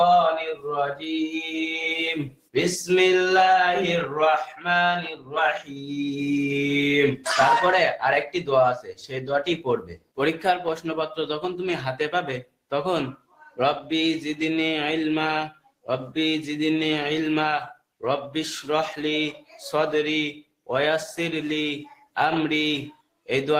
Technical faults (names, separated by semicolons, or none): noise suppressor applied to music or sounds; sound cut by the noise suppressor